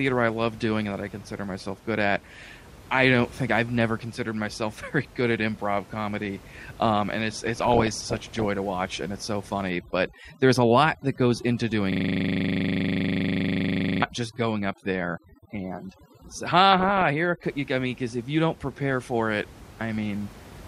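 At 7.46 s, right after "comedy um and it's", you get DAB burbling through to 8.45 s, just before "to watch and it's". Bit errors at a rate of around one percent slip past error correction and corrupt the MP2 data, so individual sub-bands pop in level frame by frame, giving that bubbly, squelchy chirping on top of the speech.

From 9.70 s, after "watch and it's so", overdone noise removal kicks in and runs to 17.43 s, ending just before "I mean because if". The room noise, sitting about 22 dB below the speech, gets clamped to near silence with twinkly specks left behind. Quieter parts of the speech get pulled down with it.

Inside that stretch, from 11.92 to 14.02 s, there's a system hang loop. The machine froze while the audio hardware kept replaying a single 40 ms chunk of its ring buffer, about fifty times over. At a 25 Hz repeat rate that comes across as a rough buzzy stutter rather than anything intelligible.

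A second, shorter burst of DAB burbling hits from 16.72 to 17.06 s, still under the noise removal. The error rate is lower, around half a percent, but it brings the burbling back briefly.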